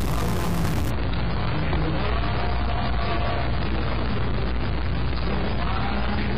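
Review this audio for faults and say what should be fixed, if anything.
Stuck bit, throughout: a distortion rides on everything and quiet stretches fill with noise, most likely from one data bit held fixed by a faulty line or converter.

Adaptive stream at a lower bitrate, 0.91 s to the end: the treble abruptly disappears above 5 kHz with thicker codec artefacts, pointing to a switch from roughly 96 to 16 kbit/s AAC.

To prevent both, check the converter and data wiring for a stuck line, and buffer or cap the stream so it keeps the higher-bitrate version.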